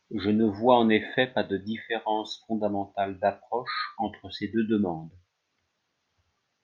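No technical faults can be heard anywhere in the recording. Nothing in the speech calls for comment from a technical standpoint.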